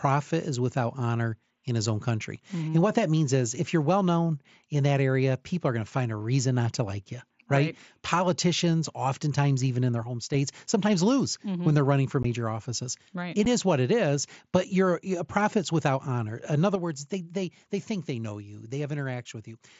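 At 2.36 to 2.43 s and again from 10.03 to 10.34 s, between "oftentimes even in their" and "sometimes lose", the speech level drops abruptly by about 6 dB. This is likely one channel dropping out before the mono sum. The drop is a level step, not a gap.

At 12.23 s, after "when they're running for", the sound breaks off with a hole of 15 ms. At 13.45 s, just before "is what it is", there is a second hole of 7.5 ms. Both are unconcealed Bluetooth headset packet loss, and the lengths fit one or two lost packets. Unlike the channel drop, each is a true hard-edged hole.

From 16.76 s to the end, the same steady 6 dB step in level returns.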